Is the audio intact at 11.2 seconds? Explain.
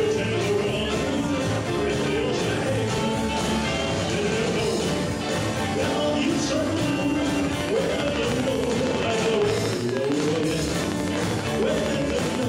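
No, a train of clicks runs from 7.45 to 12.44 s: regular ticks at 12.7 per second, likely interference, standing roughly 15 dB above the sound as evenly spaced waveform spikes and thin vertical spectrogram lines.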